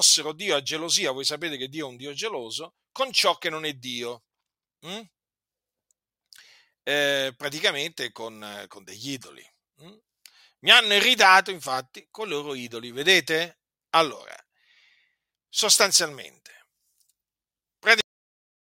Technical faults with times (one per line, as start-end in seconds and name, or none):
18.01-18.77 cut-off end